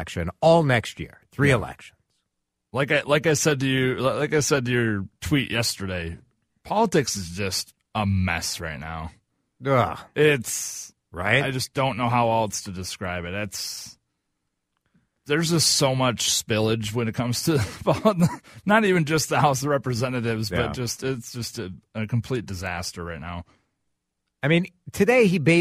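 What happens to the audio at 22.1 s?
Nothing goes wrong at 22.1 s; the speech carries straight through that point with no dropout, click, distortion or other fault.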